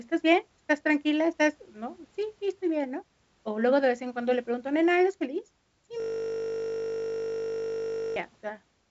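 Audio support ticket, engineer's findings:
Steady 50 Hz buzz replacing the speech from 6.00 to 8.16 s. System hang loop: driver or host stalled while the audio device kept replaying one 20 ms ring-buffer segment, repeating it exactly about a hundred times until recovery.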